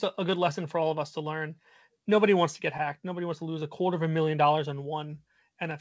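Clock drift between sender and receiver runs through the whole speech clip: the sending clock is slow by roughly five percent, so the jitter buffer keeps draining and the receiver must stretch the stream to avoid running dry. The audio travels over the G.722 call path, which passes nothing above 8 kHz.

Repeated timing corrections fill the stretch from 0.19 s to 5.51 s, all in the stretching direction. The receiver repeats short pieces at uneven intervals, bringing the effective speed to 96% and adding around a fifth of a second, heard, if at all, as slight hiccups and a dragging tempo.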